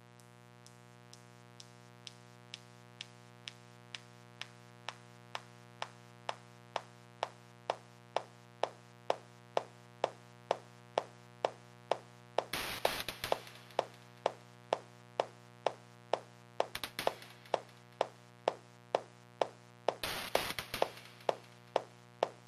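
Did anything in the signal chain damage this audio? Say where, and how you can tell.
Yes. The damage is in the analogue wiring: a mains buzz at 60 Hz runs for the whole clip, sitting roughly 20 dB under the signal. It sounds steady and raspy rather than a pure hum because switching spikes leak in twice per mains cycle. On a spectrogram it shows as a comb of fixed horizontal lines at 60 Hz multiples reaching several kHz. In quiet stretches the waveform shows sharp spikes repeating every 8.3 ms.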